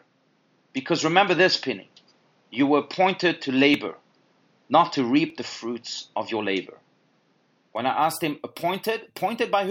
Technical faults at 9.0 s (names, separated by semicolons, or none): none